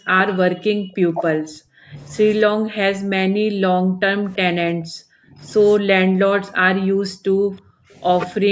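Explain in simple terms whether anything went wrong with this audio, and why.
Yes, two things went wrong. The main one is speech suppressed in double talk. The voice keeps sinking away, dulling or breaking into pieces from the start to 0.26 s, from 0.44 to 1.98 s, from 2.47 to 5.4 s, from 5.82 to 8.03 s, and again from 8.4 s to the end. At its worst it nearly disappears. This is likely the call's echo canceller turning everything down while both people talked at once.

The second is an echo leak. From 0.29 to 0.37 s a faint copy of the voice comes back about a third of a second late. That is likely sound from a loudspeaker on one side of the call that its echo canceller failed to remove and sent back. A distinct, delayed repeat like this differs from room reverberation, which smears the sound continuously instead of returning a separate copy.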